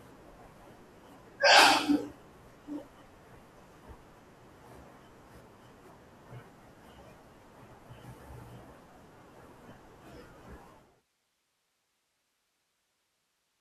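No technical faults are audible anywhere in the recording.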